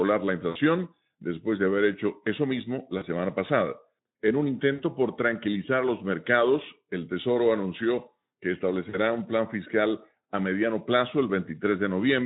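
Speech coded with Speex, at a rate that sounds like about 15 kbps, with VoIP packet loss concealed by the speech codec at 0.49–0.57 s, 2.97–3.06 s after "haber hecho eso mismo", 4.73–4.82 s before "por tranquilizar los mercados", and 8.89–8.98 s between "anunció que" and "un plan fiscal a". Each time the decoder extends its last pitch and filter with falling gain, giving a brief buzzy, fading smear that fits two to three lost 20 ms frames.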